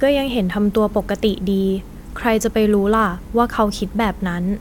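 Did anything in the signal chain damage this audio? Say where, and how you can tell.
No, nothing in the signal chain damaged this speech.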